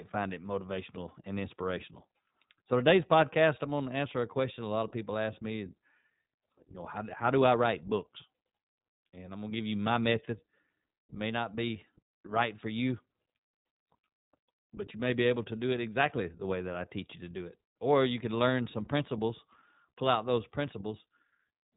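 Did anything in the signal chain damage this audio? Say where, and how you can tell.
Yes. iLBC codec damage runs through the whole speech clip, introduced at the codec stage. Nothing survives above 3.8 kHz, and the voice sounds rough and faintly synthetic. That points to 20 ms frames at roughly 15.2 kbps, each excitation coded without reference to the previous frame.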